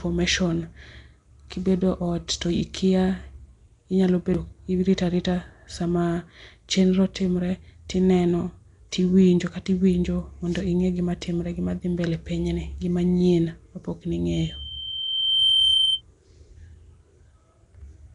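Speech throughout carries a rough, hissy halo and smeared, underwater texture with nothing above 10.6 kHz, likely Nellymoser compression at a rate that fits about 44 kbps. From 14.32 to 16.02 s, a loudspeaker feedback squeal at 3.1 kHz swells over roughly a second to about 5 dB above the speech as the mic-speaker loop runs away.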